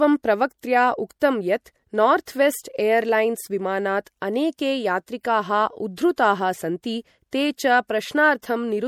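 Across the whole clip, the speech carries plainly audible MP3 compression artefacts. They likely come from an encoder starved of bits, which fits a bitrate near 64 kbps. Nothing remains above 19.5 kHz. Weak detail flickers between frames, sounding watery and swirly.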